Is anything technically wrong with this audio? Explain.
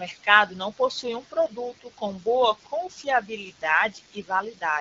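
No, nothing here is technically wrong: it's speech carried over the AMR wideband (HD Voice) codec at 12.65 kbit/s, which is doing its job as intended.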